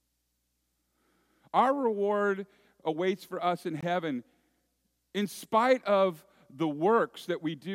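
At 3.81 to 3.83 s the speech drops out for about 21 ms. This is a gap at a join of encoded pieces. Separately encoded segments were spliced untrimmed, leaving encoder delay and end padding as silence. The edges are smeared, and the speech then resumes where it stopped.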